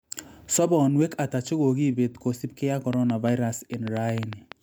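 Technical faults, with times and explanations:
2.93–4.53 s, train of clicks: right after "ata chekokipet kosipkei ak", around ten similar pops arrive at an uneven pace, about 6.3 a second, and stand roughly 10 dB above the speech. That's likely interference from nearby equipment or a faulty connection or power supply injecting pulses.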